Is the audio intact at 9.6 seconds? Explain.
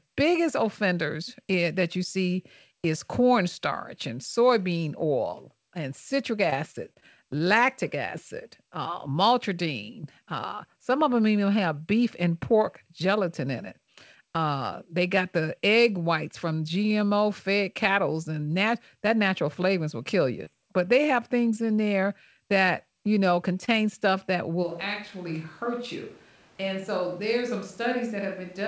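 Yes, the speech at 9.6 seconds is intact, with nothing breaking up the call path at that moment.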